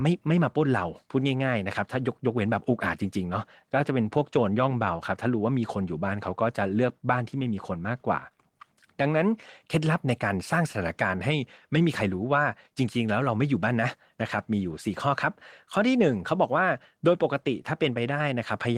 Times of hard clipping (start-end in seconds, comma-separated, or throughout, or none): none